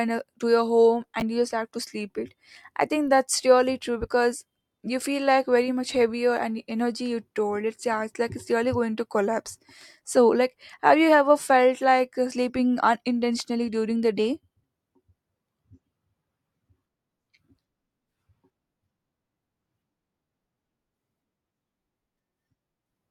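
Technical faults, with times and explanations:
1.20 to 1.22 s, chunks out of order: one 10 ms chunk of speech plays a chunk late, after the chunk that should follow it. Nothing is lost, but the swap leaves three hard joins, heard as a tiny jumbled flicker. The waveform shows abrupt steps, and the spectrogram shows thin vertical broadband lines.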